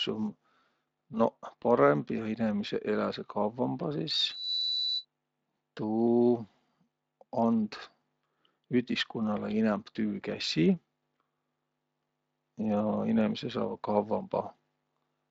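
At 4.23 s a loudspeaker feedback squeal begins: the microphone is picking up the speaker it feeds, and at 4 kHz the loop gain tips above one, so that frequency feeds on itself. It swells over about a third of a second into a piercing tone roughly as loud as the speech, then stops at 5.05 s. A spectrogram shows one bright horizontal line at 4 kHz, well inside the lightly Speex-coded band that ends near 7.6 kHz, while the waveform fills out into a dense sinusoidal envelope.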